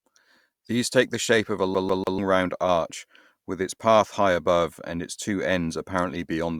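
From 1.75 to 2.18 s the speech hits a CD stuck on one turn: a scratch keeps knocking the laser back one track, so a 146 ms slice of audio repeats three times, each pass ending in a brief mute at the jump. The result is a quick, evenly spaced stutter.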